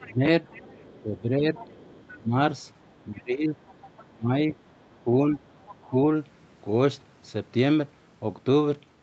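From 0.0 to 5.96 s, the talker's speech dips in pieces, for about a second and a half in total. The deepest drops reach about 20 dB. This is likely speech suppressed in double talk. The echo canceller, hearing both sides at once, turned everything down.

From 0.01 to 5.77 s, a second voice sits faintly under the talker, about 25 dB below. It is likely the other side's voice leaking through. The echo canceller left part of the loudspeaker sound in the microphone signal.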